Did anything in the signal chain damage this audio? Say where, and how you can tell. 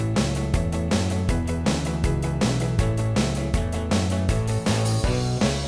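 No, nothing audible points to damage at any stage of the chain.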